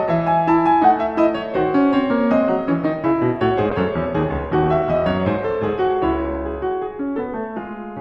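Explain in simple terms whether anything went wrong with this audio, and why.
Between 3.71 and 6.45 seconds the music goes through a call bitrate drop: the connection briefly gave the audio far less data to work with, so it was squeezed much harder. The music turns rough, watery and dull, with the bright top end shaved off, then clears up afterward. Unlike dropouts or glitches, nothing cuts out or skips. The music plays continuously; it just sounds cheaper for those few seconds.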